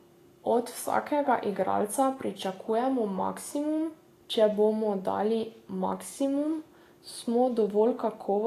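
Throughout, the speech stops at 14.2 kHz, with hissy, grainy treble. Likely Vorbis compression, which fits about 34 kbps. Coarse quantisation turns fine detail into noise.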